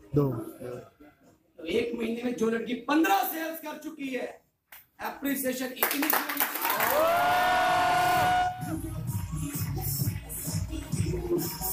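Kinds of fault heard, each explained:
No technical fault can be heard anywhere in the clip. The audio runs without any disturbance to note.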